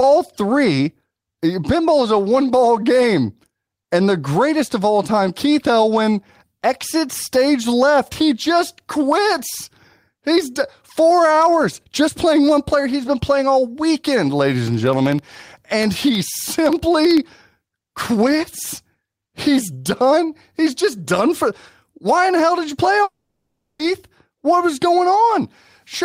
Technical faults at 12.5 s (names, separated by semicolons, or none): none